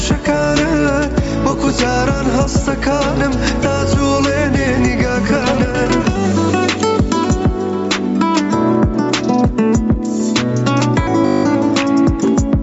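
Gain pumping runs through the whole clip, with a gain swing of roughly 10 dB. The likely cause is gain set far too high and a fast limiter clamping it down. Unlike plain compression, the breathing of the background level is what gives it away.

From 11.26 to 11.44 s a system hang loop replaces the sound with a steady buzz. It is one 20 ms stretch repeating exactly at 50 Hz, which fits a frozen driver cycling a 20 ms ring buffer about nine times. No audio is lost. Unlike a dropout or a stutter, it is a pitched, mechanically identical repeat. The call path's 8 kHz top limit applies under both faults.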